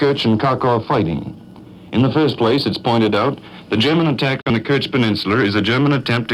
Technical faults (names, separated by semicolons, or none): digital broadcast dropout